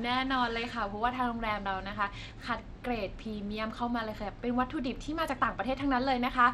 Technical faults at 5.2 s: Bluetooth SBC compression

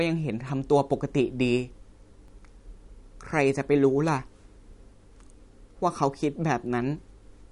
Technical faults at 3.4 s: MP3 compression

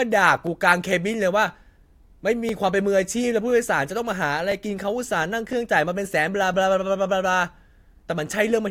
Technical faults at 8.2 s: none

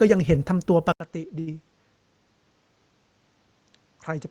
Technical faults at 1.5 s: input switched to a poorer device; burst of packet loss

